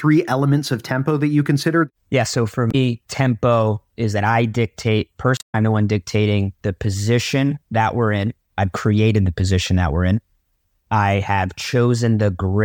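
At 2.68 to 2.75 s and 5.37 to 5.55 s, damaged data in the compressed stream makes the decoder misread frames and lose sync, producing brief glitches heard as a chirp, squawk, click or short hole.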